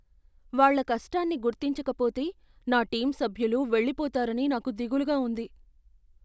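Listening to the speech recording, nothing stood out as a technical fault at any point.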